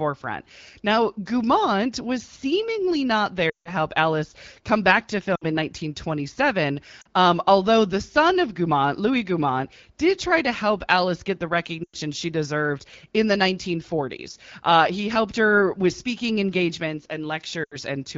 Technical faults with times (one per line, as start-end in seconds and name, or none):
3.49-3.72 lost AMR speech frames
5.35-5.45 lost AMR speech frames
7.01-7.07 lost AMR speech frames
11.83-11.96 lost AMR speech frames
17.64-17.76 lost AMR speech frames